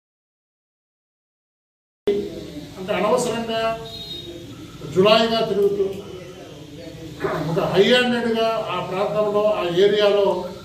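Audio dropout to silence from the start until 2.08 s: silence with no room tone, likely a lost input feed, before sound enters mid-flow.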